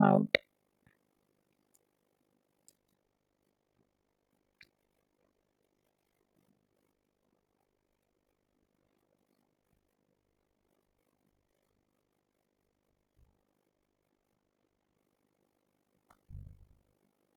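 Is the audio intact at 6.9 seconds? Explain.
No, overlap-add ripple runs through the whole clip, including 6.9 s. The speech was split into windowed frames and rejoined with overlaps that fail to sum to a steady gain, so the level swings by about 60 dB once per frame, roughly 50 times a second, giving a rough flutter.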